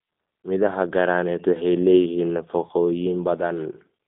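From start to finish the speech carries G.729 codec damage, band-limited to roughly 200 Hz to 3.6 kHz, with a rough, synthetic, pulse-built texture that fits a low-rate 8 kbit/s coder.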